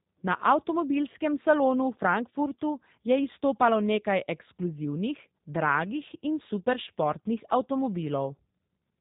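From start to finish the speech carries G.729 codec damage, plainly audible. Nothing passes above 3.8 kHz, so sibilants and consonant edges sound dull and boxy. The codec rebuilds each 10 ms frame from a vocal tract filter, a pitch predictor and a sparse set of pulses, which gives the voice a rough, slightly synthetic buzz. That character fits an 8 kbit/s G.729A link.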